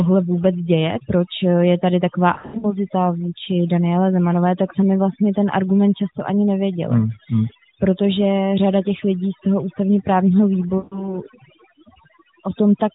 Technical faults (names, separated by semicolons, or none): overdone noise removal; lost AMR speech frames